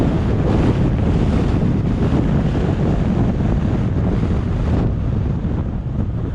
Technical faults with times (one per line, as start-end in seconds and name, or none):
0.00-6.34 MP2 compression
3.49 DAB burbling